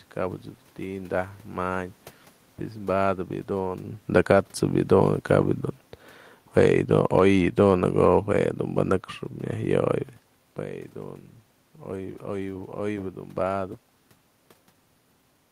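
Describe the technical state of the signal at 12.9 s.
At 12.9 s the speech signal is intact, with only the background noise of the room present and no system fault.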